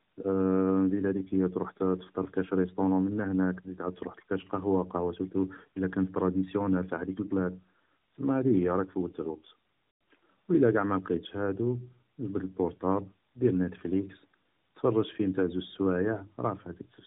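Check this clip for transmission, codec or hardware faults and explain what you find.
The clip shows one fault, tandem speech coding, present throughout. The call appears to have been passed through a narrowband speech codec twice, with an ordinary telephone link in between, which fits AMR-NB at 12.2 kbit/s on either side of a G.711 hop. The second coder had to re-encode audio the first had already degraded, so the errors stack: the sound comes out rougher, more muffled and more warbly than a single coding pass would leave it, with nothing above 3.8 kHz.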